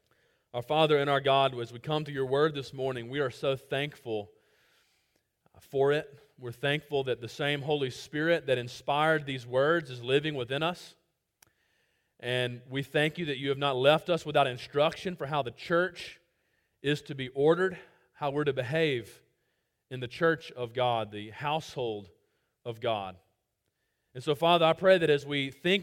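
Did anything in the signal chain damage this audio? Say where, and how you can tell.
No, nothing in the chain audibly damaged this audio; every stage from capture to playback passes the signal without an artefact I can point to.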